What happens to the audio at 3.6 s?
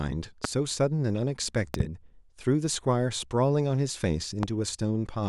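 Nothing goes wrong at 3.6 s: the speech continues cleanly through that moment with no dropout, click, distortion or other fault to be heard.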